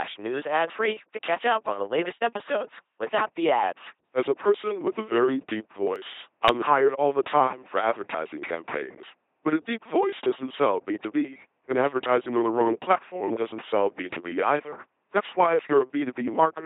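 From start to finish, the speech passes through an LPC-10 vocoder, and the damage is heavy. Each moment is modelled as a short all-pole filter fed by either a pulse train or noise. The result is a buzzing, mechanical robot voice. Wrong voicing choices swap buzz and hiss. The thin, synthetic quality points to the 2.4 kbit/s LPC-10 rate.

At 5.96 s, between "very deep" and "I'm hired all", the sound jumps forward slightly. The loss is tiny, around a millisecond or two. There is no gap of silence. The two sides butt straight together. This is likely a dropped buffer (overrun), where samples were overwritten before being read.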